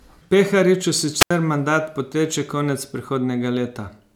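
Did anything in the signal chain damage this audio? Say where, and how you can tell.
Yes. The damage happens at the radio link, before the converter. It is a wireless microphone squelch dropout at 1.19 to 1.31 s. The speech gives way to a short burst of hiss. Then comes a hole of near silence lasting about 80 ms. The speech then resumes. The FM signal from the transmitter weakened until the receiver's squelch closed. The squelch muted the output rather than pass pure static.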